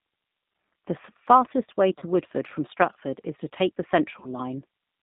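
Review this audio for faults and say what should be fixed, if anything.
G.729 codec coding runs throughout: speech sits in a 150 Hz to 3.7 kHz band at 8 kbit/s, sounding rough and synthetic rather than merely muffled. A wideband codec or higher bitrate would prevent it.

VoIP packet loss concealed by the speech codec occurs at 1.99–2.04 s, after "fastest way", and 4.20–4.27 s, after "is to take the". Each fits one lost 30 ms packet, filled with a fading extrapolation of the voice, a buzzy tone or coloured noise, rather than a silent gap. Forward error correction or redundant packets would prevent this.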